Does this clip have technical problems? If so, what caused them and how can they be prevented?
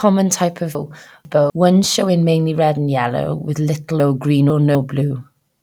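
Yes: chunks out of order, twice, from 0.75 to 1.5 s (just before "one showing mainly red") and from 4.0 to 4.75 s (after "and yellow with little"). In each stretch a 250 ms chunk plays two chunks late, so the speech jumbles, with three hard joins. Buffer incoming chunks and reorder them by sequence number before playback or writing.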